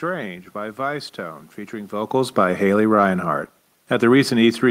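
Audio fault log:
throughout: clock drift between sender and receiver. The sender's audio clock runs roughly 3% slower than the receiver's, so the jitter buffer keeps draining, and the receiver has to stretch what arrives to avoid running dry. The result is small, unevenly spaced timing hiccups across the clip.
0.24–4.65 s: repeated timing corrections. To keep pace with the slow sender, the receiver repeatedly repeats short pieces of audio, adding about 150 ms in total so that playback runs at 97% speed. The repeats are unevenly spaced, and the level change near 2 s comes from the talker moving.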